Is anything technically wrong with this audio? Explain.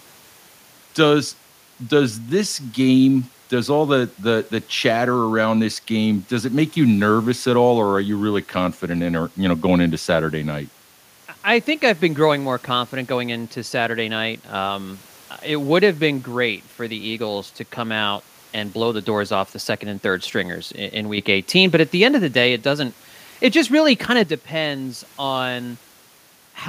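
No, no technical faults heard.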